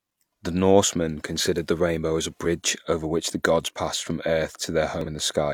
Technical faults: damaged data in a compressed stream

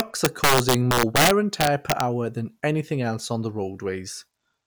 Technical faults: integer overflow

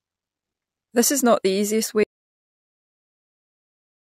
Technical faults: audio dropout to silence

